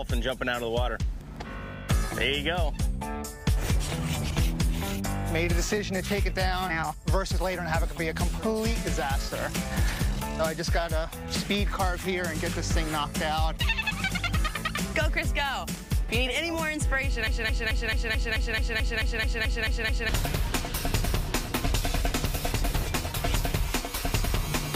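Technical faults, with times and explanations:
17.27 to 20.09 s, broken-record loop: a 218 ms fragment repeats 13 times. Likely a stalled stream resending its last piece. Intended audio is lost.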